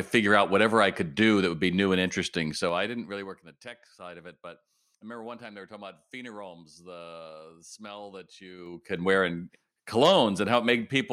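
From 2.42 to 3.53 s a slow ticking rides on the speech as it drops by roughly 20 dB, and from 8.55 to 9.01 s a faster zipping accompanies a rise of about the same amount. This is zipper noise: the gain moves in unsmoothed 3 dB jumps, each leaving a small click.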